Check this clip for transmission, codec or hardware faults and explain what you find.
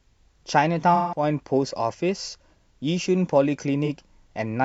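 The speech has two dropouts from AAC frame loss with concealment. The first runs from 0.95 to 1.23 s, a gap of about 0.17 s, which fits roughly four lost frames. The second is brief, from 3.85 to 3.88 s, about 43 ms, consistent with one frame. The decoder covers each gap by reusing the last good spectrum with altered signs or estimated energy. So the speech turns smeared and noisy, with a hollow, phasey texture.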